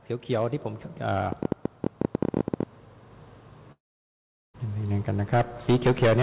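From 1.32 to 2.64 s a train of clicks, around twenty irregularly spaced pops at about 15 per second and roughly 15 dB above the sound, likely comes from interference, not a single dropout click. From 3.72 to 4.56 s a long network dropout, likely packet loss, loses 0.82 s. A brief fading buzz gives way to 0.75 s of silence, then the audio resumes further on rather than picking up where it stopped.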